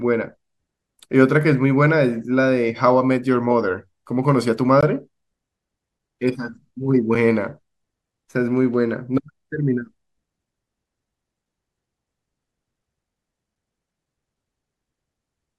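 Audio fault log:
4.81 s and 7.15 s, block of digital silence: the samples drop to silence for about 18 ms and then about 5 ms (the second fits a 256-sample buffer left unfilled), heard as a short hole and then a tick. The waveform shows flat gaps with hard edges; the spectrogram shows thin vertical broadband clicks.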